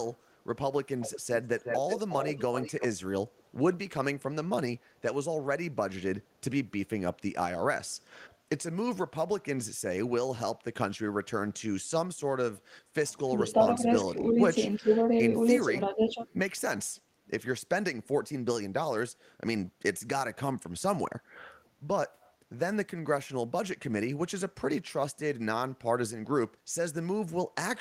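Echo leak from 1.0 to 2.87 s in this speech recording: a copy of the voice returns 361 ms late at about 10 dB below the speech, with fainter scraps at 3.37–3.43, 8.21–8.33, 13.49–13.53 and 16.25–16.33 s, likely because a far-end echo canceller left loudspeaker pickup in its outgoing signal. Speech suppressed in double talk from 13.33 to 16.24 s: while both sides overlap, the voice dips by up to about 10 dB for roughly 1.5 s in total, likely because the echo canceller mistook the talker for echo and attenuated everything.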